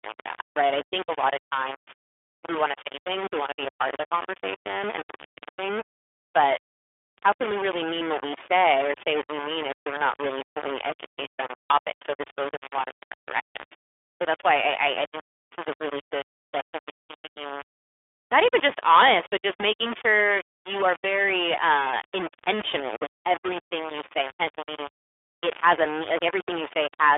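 All the way through, the speech carries a harsh, grainy distortion that tracks the voice, with the error only about 10 dB below it. That's likely a 3-bit low bit depth without dither, rounded rather than dithered. It also has the iLBC codec's narrowband sound: nothing above 3.7 kHz, and a rough, synthetic edge that fits 30 ms frames at around 13.33 kbps.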